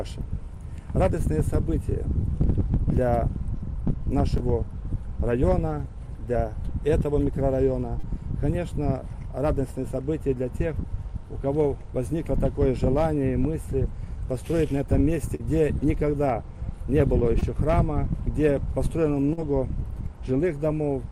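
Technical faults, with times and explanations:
4.37, 7.99, 15.35, 17.39 and 19.33 s: short concealed packet loss. Stretches of 20 ms at 4.37 and 17.39 s and 40 ms elsewhere never reached the decoder in time. The receiver extended the preceding sound, keeping its pitch or as shaped noise, then blended back, leaving brief smears or wobbles.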